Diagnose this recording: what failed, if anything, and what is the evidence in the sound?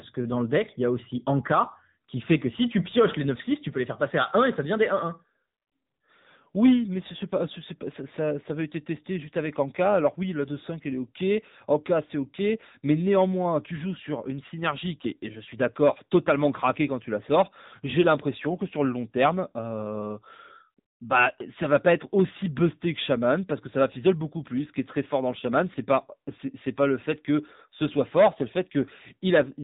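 The speech is thin and buzzy throughout, with nothing above 3.8 kHz. This is codec-stage damage from the AMR narrowband mobile codec, fitting a low mode near 8 kbps.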